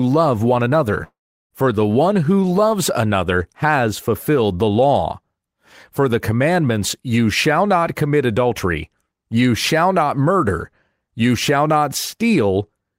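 Speech clip with a long network dropout from 1.03 to 1.54 s, just after "love one": the last sound smears into a fading buzz, then about 0.37 s of silence, and roughly 0.48 s of audio is likely lost in transit. Spectrograms show a blurred decaying tail, then a dark gap.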